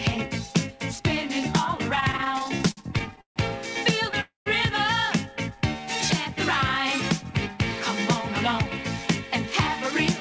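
From 1.96 to 3.38 s the audio suffers repeated stalls, a stutter. It halts and restarts 17 times across that stretch. Each halt is filled by a held, smeared continuation of the preceding sound. The longest lasts 148 ms and fades as it goes. Together they fill 360 ms, about a quarter of the span. Packets reached the jitter buffer later or slower than playback, so it kept running dry. Nothing drops out. The sound just drags and catches.

At 4.21 s a call audio freeze begins and lasts until 4.48 s. The last sound hangs as a fading buzz or hiss, then falls to silence for 140 ms. Playback then resumes where it stopped, 253 ms late, with nothing missing. The likely cause is packets held up in transit, emptying the jitter buffer. The G.722 call path shows its usual limit, with nothing above 8 kHz.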